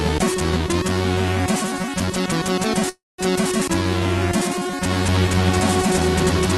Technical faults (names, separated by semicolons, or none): call audio freeze; doubled audio track